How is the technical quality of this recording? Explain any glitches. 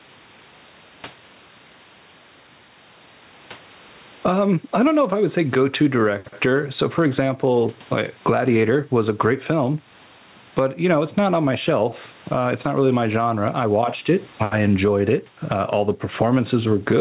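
The recording has gain pumping throughout. It is heard within a band that stops at 4 kHz, which fits a G.711 mu-law call path at 64 kbps.

Gain pumping, throughout the clip: the gain swings by around 15 dB, with the room noise about 40 dB below the speech. The likely cause is excessive microphone gain driving a fast limiter. On a waveform, the speech peaks look flattened while the noise floor rises and falls between phrases.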